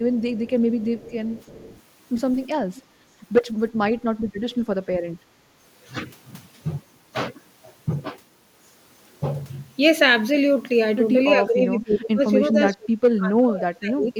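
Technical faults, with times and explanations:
0.17–0.51 s, 0.79–1.81 s and 2.75–2.82 s, echo leak: a faint delayed copy of the speech trails it by 346 ms, some 20 to 25 dB below. It is likely the far end's loudspeaker feeding its microphone uncancelled. Unlike reverb, it is a distinct repeat, not a smear.
2.89–3.00 s, background gated by the echo canceller: for about a tenth of a second the room sound sinks by about 10 dB, then returns. The canceller clamped the microphone while its loudspeaker played. The background drops, not the speech, which separates it from double-talk suppression.
5.37–5.44 s, 11.38–12.21 s and 12.48–14.13 s, speech suppressed in double talk: the talker's own speech dips by around 20 dB, and in the last stretch by around 35 dB. This is likely an echo canceller turning down both its talker and the loudspeaker echo while both sides spoke.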